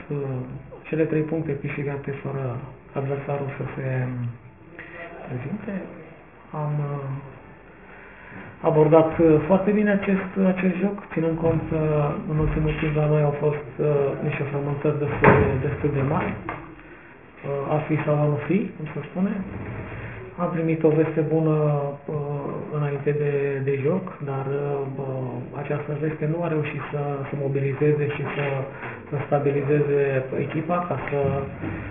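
Aliasing runs through the whole clip. Everything above 3 kHz has folded back down into the band as gritty, metallic tones that don't belong. That fits a drop to 6 kHz sampling with no filtering beforehand, and the folded junk sits only about 20 dB under the sound itself.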